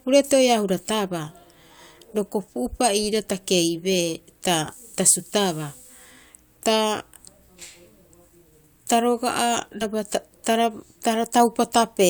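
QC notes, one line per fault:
9.81–9.84 s, compressed frames skipped. About one 20 ms frame of the speech never plays, so the audio jumps ahead by roughly 20 ms. The missing frame was absent or rejected as damaged.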